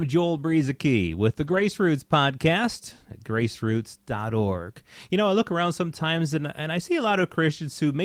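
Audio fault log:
1.43–1.61 s, lost packets rebuilt from error correction: the speech turns briefly rough and grainy but never drops out. Several packets in this span were lost. Each following packet carried a low-bitrate backup copy of the missing one, Opus in-band forward error correction, and the decoder played those copies instead of leaving a gap. The degraded audio adds up to about 100 ms, which fits five 20 ms packets, and the coarser encoding explains the noisier texture.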